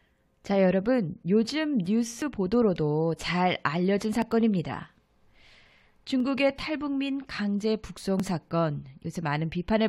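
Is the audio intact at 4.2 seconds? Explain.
No. At 4.22 s there is an overlap between stream segments, where two segments of about 2 s each claim the same few milliseconds, so roughly 8 ms of speech is trimmed away. It sounds like a tiny skip. A waveform shows a sudden discontinuity, and a spectrogram shows a thin vertical broadband line.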